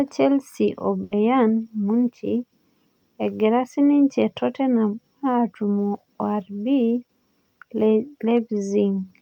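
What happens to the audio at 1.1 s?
A burst of packet loss hits from 1.03 to 1.13 s: the receiver holds the last sound, fades it out, then skips ahead past about 80 ms.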